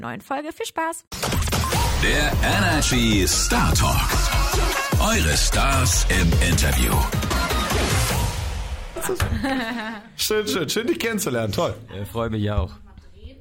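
At 7.30 s, compressed frames are skipped: the decoder never plays a stretch of roughly 20 ms, so the audio jumps ahead with no silent gap, just a brief blip or click at the join. A dropout would instead leave a hole.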